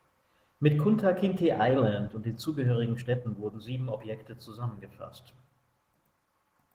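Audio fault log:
throughout: Opus voice compression. The codec runs in hybrid mode, with a linear-prediction core below 8 kHz and a transform layer above. Its coarse excitation coding, consistent with roughly 16 kbps in 20 ms frames, leaves the speech plainly hoarse and slightly robotic.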